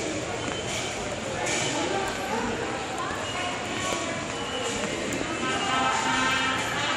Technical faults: loud pop

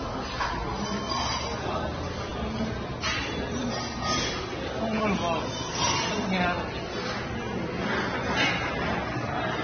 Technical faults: transcoding between lossy codecs

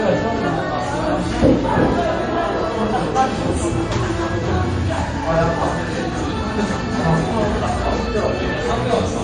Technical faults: transcoding between lossy codecs

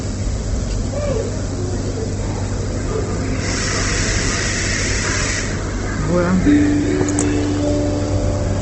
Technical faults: Opus compression

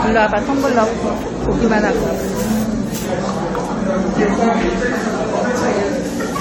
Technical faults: generation loss

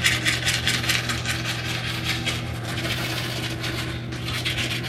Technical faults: time-stretched section

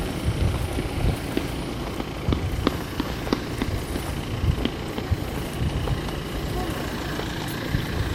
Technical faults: DAB burbling

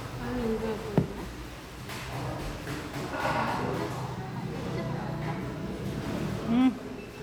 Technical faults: none

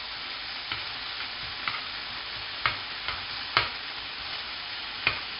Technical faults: 4-bit ADPCM compression

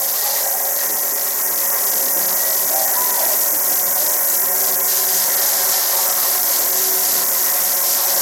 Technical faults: Bluetooth SBC compression

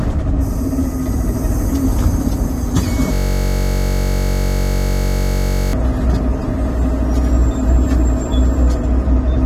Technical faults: system hang loop

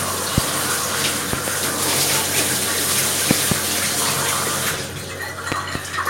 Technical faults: loud pop

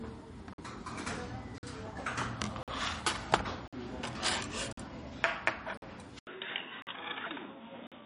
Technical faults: MP3 compression; gap between chunks; input switched to a poorer device

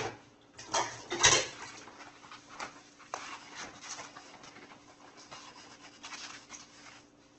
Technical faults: Opus compression

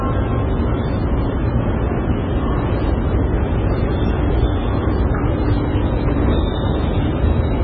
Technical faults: MP3 compression

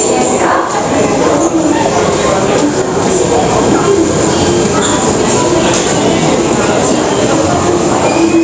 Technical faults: gain pumping

